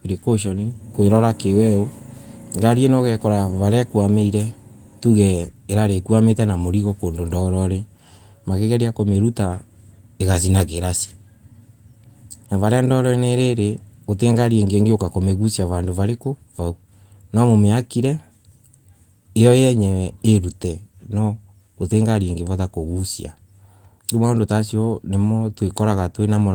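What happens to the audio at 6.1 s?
Nothing goes wrong at 6.1 s; the speech carries on intact through that moment, with no dropout, click or distortion.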